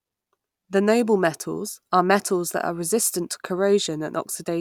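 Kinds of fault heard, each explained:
No technical faults can be heard anywhere in the recording, with the signal holding steady and continuous throughout.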